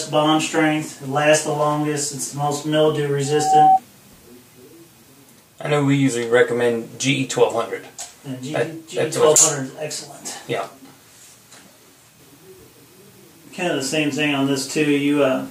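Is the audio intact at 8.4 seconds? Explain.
Yes, the audio is intact at 8.4 seconds, with no dropout, click, distortion or other fault at that point.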